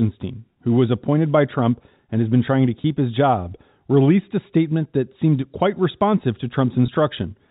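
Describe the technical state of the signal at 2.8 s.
At 2.82 to 2.84 s, between "has been trying to" and "his job released a", there is packet loss with pitch repetition. About 20 ms of audio went missing, which fits a single lost packet. The receiver filled the hole by repeating the last pitch period, so the sound briefly holds with a slight buzzy sustain. Unlike a plain dropout, there is no silent gap, and the loss is too short to fade out.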